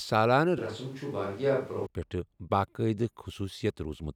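Speech, with a switch to a distant microphone from 0.58 to 1.86 s. The voice abruptly turns roomy and hollow, drops about 5 dB, and gains background noise. The likely cause is a failed close microphone.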